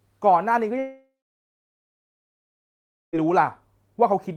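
From 0.79 to 3.16 s, likely a long network dropout: a fading buzz, then 2 s of silence, and 2.3 s of speech lost, never played.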